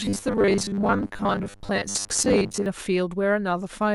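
From 0.01 s to 2.66 s the speech takes on a robotic sound from repeated short buffers: a rigid, metallic buzz at 100 Hz sits over the voice, which still roughly tracks the words. The likely cause is audio arriving too seldom, with the player looping the last stretch of samples to fill the gaps. A 100 Hz buzz fits a repeat length of about 10 ms, and roughly half the material is repeats rather than real audio.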